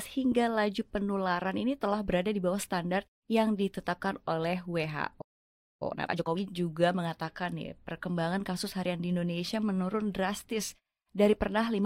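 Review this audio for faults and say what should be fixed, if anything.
The player most likely ran short of buffered data, or had its output thread blocked, and produced nothing until it recovered. This is a playback stall: the speech cuts off mid-flow at 5.21 s and the output stays silent for about 0.59 s, until 5.82 s, when the sound resumes. To prevent it, keep a deeper playback buffer and run the audio output on a thread that other work cannot block.

Once playback resumed, the player worked through its accumulated backlog by removing short slices of audio and cross-fading across the joins. The result is time-compressed catch-up from 5.82 s to 6.40 s, running at 2.0 times normal speed. The speech sounds rushed, but its pitch stays where it was. Preventing the stall would remove the backlog, and a gentler catch-up rate would make any remaining correction far less noticeable.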